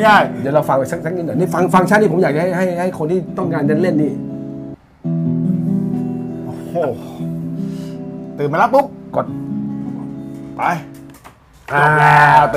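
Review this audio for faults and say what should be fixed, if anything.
No faults found in the recording, so nothing needs fixing.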